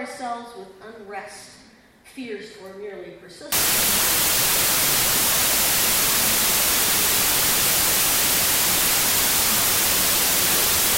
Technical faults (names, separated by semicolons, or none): wrong sample width